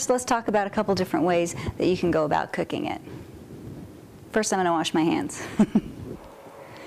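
At 0.49 s there is a repeated buffer. Fresh audio arrived late, so the last block played once more. The repeated piece lasts about 2.9 ms, which fits a 128-sample buffer. It sounds as a single brief click, with almost nothing lost.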